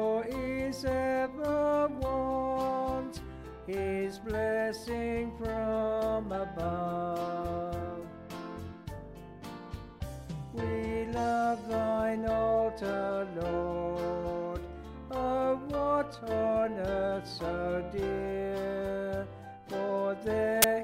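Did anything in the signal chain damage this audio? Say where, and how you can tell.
Yes. At 20.62 s, right at the end, there is a very short burst of very loud white noise with hard edges, a flat hiss that starts and stops abruptly with no fade. This is file tags played as audio, a fault at the storage and playback stage: the player has read part of the file's metadata block as samples. The block here holds a compressed cover picture, and compressed data is close to random, so it decodes as loud static rather than a rasp or silence.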